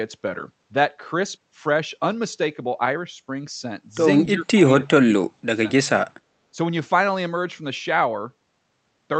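From 4.25 to 5.62 s the speech is pushed down hard in bursts, dropping by some 35 dB at its deepest and affected for around a second in total. A shorter dip follows from 5.87 to 6.05 s, roughly 30 dB down. The pattern points to speech suppressed in double talk: the echo canceller likely treated overlapping far-end sound and this talker as echo and attenuated both together.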